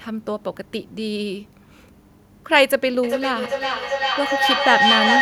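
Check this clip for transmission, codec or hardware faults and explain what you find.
There is one fault: feedback echo between two devices, from 3.03 s to the end. Each word returns roughly every 400 ms, thinner and more ringing each pass, and the repeats build up rather than fade, peaking about 2 dB above the speech. Two devices on the call share a room, so each replays what the other's microphone sent, and neither echo canceller removes the other's playback. Unlike single acoustic echo or reverberation, the repeats keep circulating and growing.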